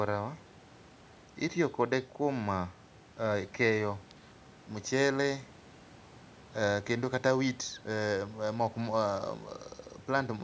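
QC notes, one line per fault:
No faults found in this clip.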